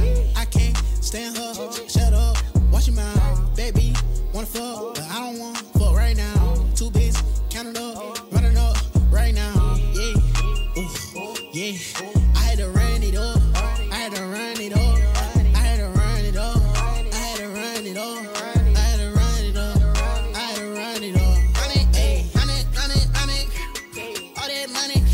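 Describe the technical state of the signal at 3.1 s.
At 3.1 s the signal is intact, with no dropout, distortion, glitch or other fault audible at that moment.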